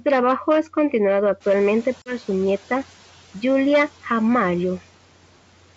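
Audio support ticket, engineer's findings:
Noise suppressor catching up, 1.4–2.31 s, after "trabajo es continuado": noise estimate lags a sudden room-noise rise of about 14 dB, so noise leaks through, then sinks about 6 dB over 0.91 s.

Packet loss on an ADPCM call, 2.02–2.18 s: a hard-edged 40 ms dropout, fitting about two lost packets. The decoder's predictor and step size desync, so audio returns briefly distorted.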